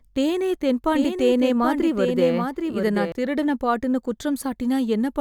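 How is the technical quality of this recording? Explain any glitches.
The recording has one glitch: a doubled audio track from 0.94 s to 3.12 s. During that stretch, a second copy of the speech trails the original by roughly 0.7 s at about 5 dB lower, likely because the same signal was captured again through a slower path. The copy is full-band, dry and without reverb tail, and it cuts in and out abruptly. On a spectrogram, the speech patterns repeat, shifted right by that fixed offset. In the waveform, this shows as overlapping envelopes with hard edges.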